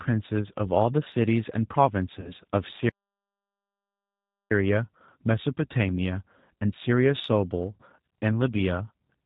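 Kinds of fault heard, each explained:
G.729 codec: The whole clip carries the rough, slightly synthetic quality of a low-rate speech codec that rebuilds the voice from a vocal tract model, a pitch predictor and a few pulses per frame, consistent with 8 kbit/s G.729A. Nothing above 4 kHz comes through, so sibilants are dull. Unlike plain band-limiting, which only muffles, this damage is plainly audible as a rough, synthetic texture.
VoIP packet loss concealed by the speech codec: Twice the speech turns into a stretched, fading buzzy tone or coloured noise, from 2.20 to 2.34 s and from 7.74 to 7.83 s. The decoder is filling gaps of 40 ms and 60 ms by extrapolating its last pitch and filter, which fits two and three lost 20 ms packets. The voice stays weak for a moment after each gap. A plain dropout would give silence or a click instead of this smeared, decaying sound.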